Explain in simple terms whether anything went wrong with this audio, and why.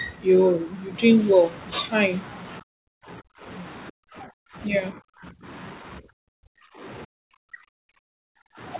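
Yes, something went wrong. The speech keeps getting pushed way down or chopped out between 2.61 and 3.46 s, 3.9 and 4.76 s, 4.92 and 5.47 s, 5.8 and 6.84 s, and 7.05 and 8.6 s. That's likely speech suppressed in double talk: the echo canceller mistook this talker for echo while both sides spoke.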